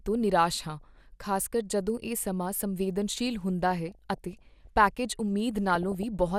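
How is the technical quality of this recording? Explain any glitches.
Quality's let down by three bursts of DAB burbling in this speech clip: 0.70 to 1.05 s (after "ਤੋਂ ਨਿਰਾਸ਼", before "ਖ਼ਾਸਕਰ ਜਦੋਂ ਇਹ ਸਮਾਂ"), 3.71 to 4.67 s, and 5.69 to 6.03 s. Weak reception lets bit errors slip past error correction, corrupting sub-band samples and levels frame by frame, which puts short blips of noise and sudden level jumps into parts of the voice's spectrum.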